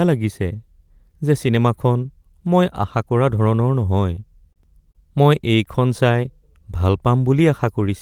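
Speech with two short stalls from a late packet, at 4.53 to 4.59 s and 4.92 to 4.98 s. Each time the jitter buffer ran dry, and the receiver held the last sound for 32 ms and then 30 ms until the packet arrived, so nothing is lost but everything after plays slightly later. On a spectrogram each shows as a brief flat, smeared band; in the waveform, a short stretch of repeated cycles.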